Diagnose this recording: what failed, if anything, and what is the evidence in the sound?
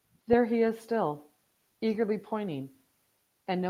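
Nothing failed in this recording, and there is no evidence of any fault in the sound.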